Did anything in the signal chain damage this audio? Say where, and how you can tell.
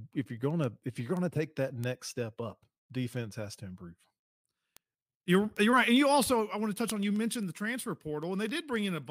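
Yes. Word clock ticks from an unlocked digital link run from 0.11 s to 9.03 s: about seventy sharp ticks of uneven strength, roughly every 0.15 s. The receiver's clock drifts, probably by around 150 ppm, so each slip drops or repeats one sample.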